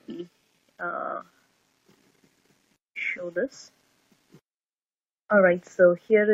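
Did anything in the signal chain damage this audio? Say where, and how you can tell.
Yes: repeated frames from 0.99 to 1.13 s. A 46.4 ms block of coded audio, which fits about two compressed frames, plays three extra times, stuttering and lengthening the sound by 139 ms.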